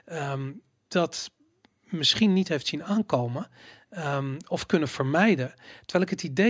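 Speech recording, with no audible technical faults anywhere.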